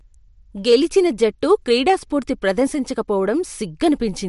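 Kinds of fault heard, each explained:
Hard clipping: the speech briefly exceeds what a stage in the chain can pass, so its peaks are sliced flat. The overload is about 2 dB, from 0.69 to 0.75 s, heard as a short crackle where the squared tops add high harmonics.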